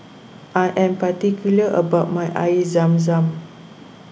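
Nothing stood out on listening to this speech recording.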